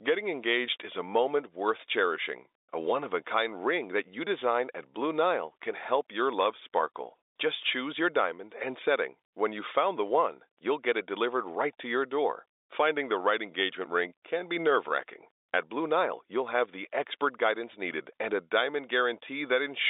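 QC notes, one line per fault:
No faults are present; the speech sits within a telephone band of about 300 Hz to 3.7 kHz with nothing above 3.8 kHz, as expected from G.711 mu-law coding, and any quantisation noise from the codec stays faint.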